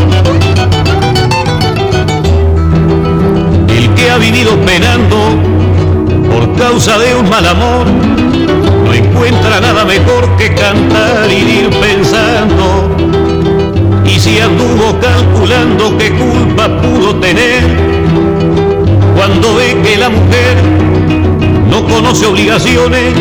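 From start to finish, the signal is driven about 12 dB past what a stage in the chain can pass, producing hard clipping: close to a third of the waveform is sliced flat at the ceiling. Those squared-off peaks spray high harmonics, giving every loud moment a harsh, gritty fuzz.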